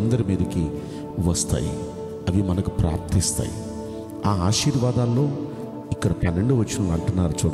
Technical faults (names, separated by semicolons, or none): corrupt frame decoded